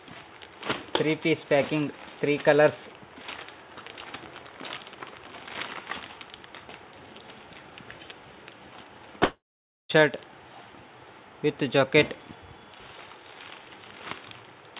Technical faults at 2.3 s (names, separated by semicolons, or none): none